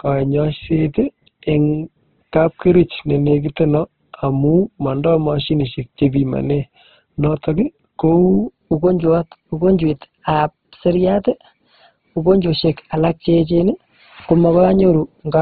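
From the first moment the speech is band-limited and grainy, with nothing above about 4 kHz. The vowels are rough and noisy rather than swirling, because the codec fills starved bands with noise or folded copies of lower ones instead of leaving holes. This points to Opus compression, likely in its CELT music mode, at a very low rate that fits about 12 kbps. That graininess, with no metallic warble, is what separates it from MP3 damage.

At 8.44 s the section at the wrong speed begins and lasts to the end. Playback runs 1.12 times too fast, so the speech becomes hurried and rises by roughly two semitones. Pitch and tempo move together, which likely means this stretch was clocked at the wrong rate, and that is what separates it from a pitch-shift or time-stretch, where only one of the two would change. The lifted, quickened delivery holds steady through to the final second.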